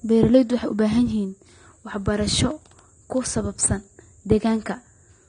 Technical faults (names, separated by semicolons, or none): AAC compression